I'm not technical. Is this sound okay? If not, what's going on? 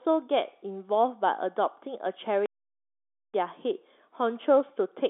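No. At 2.46 seconds the speech just stops for almost a second, then carries on at 3.34. That's a playback stall, most likely the player briefly running out of data.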